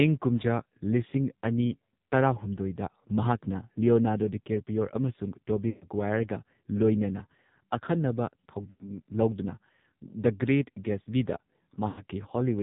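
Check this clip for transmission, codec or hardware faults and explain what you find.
Two faults are present: heavy narrowband mobile-codec damage and three bursts of lost speech frames.

AMR narrowband mobile codec, throughout: a buzzy, synthetic voice from a sparse pulse-driven vocal-tract model, which fits a low mode near 5.9 kbps. The spectrogram shows nothing above 4 kHz.

Lost AMR speech frames at 5.70 to 5.87 s, 8.70 to 8.84 s and 11.88 to 12.04 s: the decoder repeats its last settings with falling gain, so the sound smears and fades. The waveform shows decaying envelopes over roughly 100 to 120 ms.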